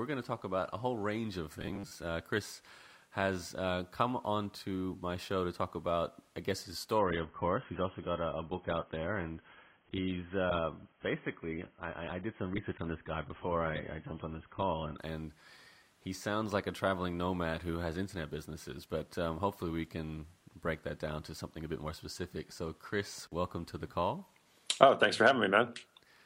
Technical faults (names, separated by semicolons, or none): robotic sound from repeated short buffers; adaptive stream at a lower bitrate